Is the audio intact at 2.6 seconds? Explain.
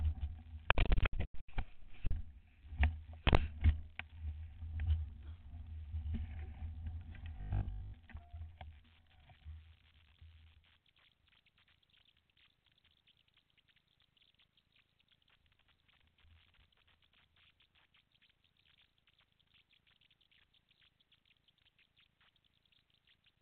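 Yes, the audio is intact at 2.6 seconds, with no fault present at that moment.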